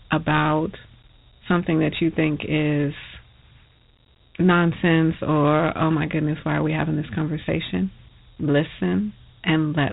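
From start to finish the speech carries Dialogic VOX ADPCM damage, the 4-bit OKI-style coding used for telephone prompts and voicemail. Each sample stores only a coarse step from a prediction, so a gritty, granular hiss rides on the speech and rises with it. Nothing sounds above 3.9 kHz, which fits 8 kHz sampling at 32 kbps. Unlike plain band-limiting, the grit follows the signal's level.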